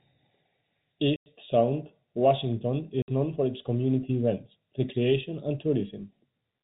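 At 1.16 s the speech drops into a hard 100 ms hole, and at 3.02 s a 60 ms one just before "known for its community". This is packet loss filled with silence; both gaps fit 20 ms packets, heard through G.711 telephone bandwidth.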